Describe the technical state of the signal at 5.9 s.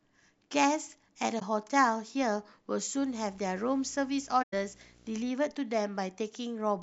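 At 5.9 s the speech signal is intact, with no audible fault at that moment.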